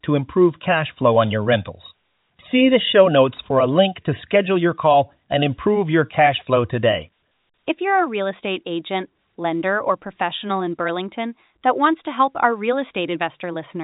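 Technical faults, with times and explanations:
No faults detected; the speech sits in a G.711 A-law telephone channel with nothing above about 3.8 kHz.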